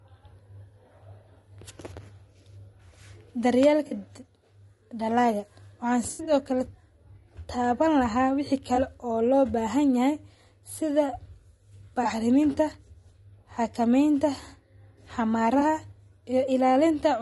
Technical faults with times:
0.00-17.22 low-delay AAC compression
3.87-3.93 AAC frame loss with concealment
6.11-6.33 AAC frame loss with concealment
8.75-8.79 AAC frame loss with concealment
12.03-12.06 AAC frame loss with concealment
15.59-15.62 AAC frame loss with concealment

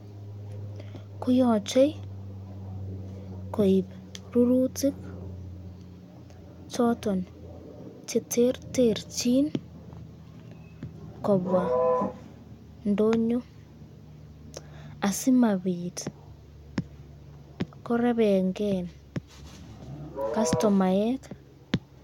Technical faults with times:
none

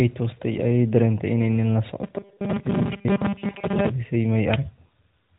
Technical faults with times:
2.03-3.90 robotic sound from repeated short buffers

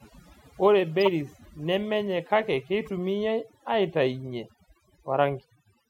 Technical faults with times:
0.00-5.89 overdone noise removal
1.01-1.08 corrupt frame decoded
2.86-2.89 corrupt frame decoded

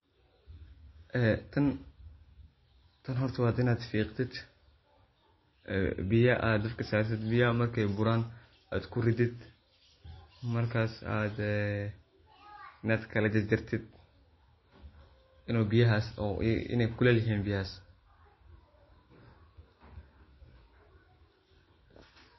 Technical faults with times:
0.00-22.38 MP3 compression

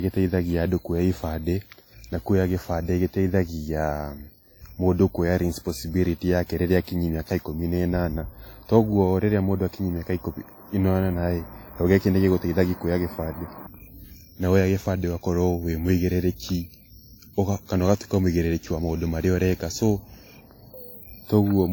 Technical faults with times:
0.00-21.73 transcoding between lossy codecs

